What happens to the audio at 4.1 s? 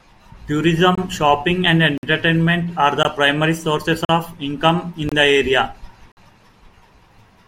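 A hard-edged hole of silence, about 42 ms long, cuts into the speech from 4.05 to 4.09 s, right after "primary sources" and just before "of income in the". The sound stops abruptly and resumes just as abruptly. This is a gap between stream segments: the timestamps of two adjacent segments don't quite meet, and the player fills the uncovered interval with silence. No audio is lost; the sound after the hole is simply pushed later by that amount.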